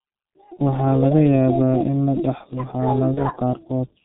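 From the first moment the speech is muffled and hoarse, with nothing above 4 kHz and consonants smeared together. This is the G.723.1 codec, heavily damaging the signal. It codes the voice in 30 ms frames at a very low rate, which fits roughly 6.3 kbit/s. That leaves too few bits for fine spectral detail, and the coarse, slow-moving voice model can't track quick consonant transitions.

From 0.53 to 0.60 s, and again from 3.14 to 3.22 s, the speech briefly turns into a fading, stretched tone or noise instead of clean sound, and stays weak or distorted just after. This is VoIP packet loss concealed by the speech codec. Each gap fits one lost 30 ms frame. The decoder filled the hole by repeating its last pitch and filter settings at falling gain, and because each frame builds on the one before, the distortion carries a little past the gap.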